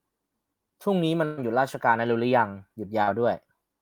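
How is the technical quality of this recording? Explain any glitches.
Two packet-loss glitches stand out in the speech.

From 1.25 to 1.39 s, the sound freezes into a held, fading buzz or hiss before jumping ahead. This is a burst of packet loss: roughly 120 ms never arrived, so the receiver stretched the last sound while lowering it, and that stretch of speech is gone.

At 3.03 to 3.09 s there is a brief smear or wobble, and a short consonant could be lost. This is short concealed packet loss: about 40 ms went missing, and the decoder patched it by extending the preceding sound before blending back.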